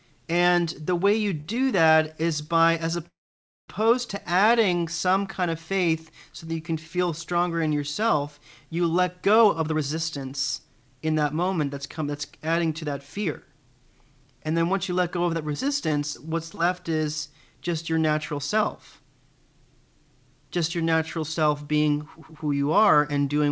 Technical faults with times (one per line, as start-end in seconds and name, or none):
1.30-1.96 repeated stalls (stutter)
3.07-3.70 call audio freeze
9.41-15.42 jitter buffer speed-up
15.53-16.59 scattered short gaps